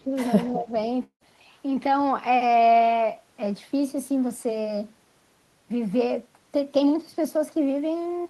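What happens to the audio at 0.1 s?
The speech is pulled down hard from 0.0 to 0.1 s, by roughly 20 dB, then recovers. This is speech suppressed in double talk. An echo canceller likely mistook overlapping talk for loudspeaker echo and attenuated the near-end speech along with it.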